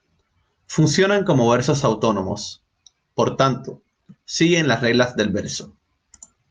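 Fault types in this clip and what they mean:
Clock drift between sender and receiver: the sender's clock runs around 4 percent fast, so the receiver's buffer keeps overfilling and must be trimmed throughout the speech.
Repeated timing corrections: from 0.07 to 6.44 s the receiver cuts short pieces at uneven intervals, with playback running at 104 percent.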